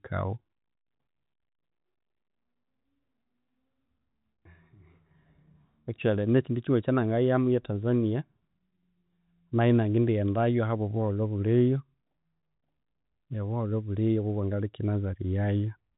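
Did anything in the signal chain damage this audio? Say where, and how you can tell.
No, nothing in the signal chain damaged this audio.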